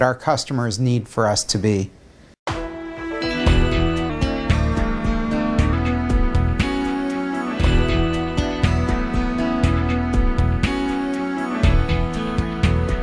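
From 4.10 to 5.73 s, a wrong sample rate fault slows the sound to about 0.92 times its speed and drops its pitch by roughly 1.5 semitones, both shifting together. That ratio fits 24 kHz material being played back at 22 kHz without conversion.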